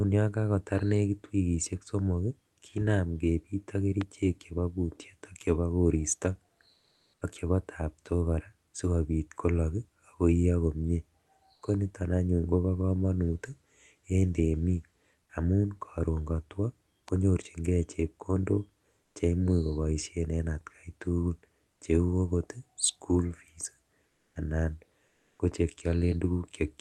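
At 4.01 s a loud pop lands on the speech, peaking about 10 dB above the surrounding signal, with the talk carrying on beneath it. The likely cause is a brief voltage step, such as a switch or driver glitch, entering the chain. On a waveform it is a single spike, about 20 ms wide, standing clear of the speech envelope. On a spectrogram it is a thin vertical stripe running across the full band.

After "ak chebo koristo", from 6.73 to 7.21 s, the room background gives way to comfort noise for about 480 ms before "ak chebo" resumes. The sender's voice detector likely judged the gap silent and stopped transmitting, which points to Opus discontinuous transmission. The receiver then filled the pause with synthetic noise. That noise is smooth and featureless, sits about 45 dB below the loud passages, and is about 3 dB quieter than the real background. On a spectrogram the textured floor turns into an even, uniform wash.

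A second, smaller pop follows "temik amun koron kotwo" at 17.08 s, peaking about 5 dB above the signal and showing the same narrow spike and vertical stripe.

The same substitution recurs at 19.03 to 19.15 s (about 1 dB quieter), at 24.07 to 24.31 s after "okot school fees" (no level change), and at 25.09 to 25.39 s (about 2 dB louder). Each appears as a flat, detail-free patch in the spectrogram's low-level floor.

The last of these overlaps an onset clipped by the voice detector at 25.37 s. About 20 ms of the returning sound was likely never sent, so it begins abruptly without its soft attack. On the waveform the envelope jumps straight up from the noise floor rather than rising. The spectrum tops out near 12 kHz throughout, which fits the call codec's bandwidth.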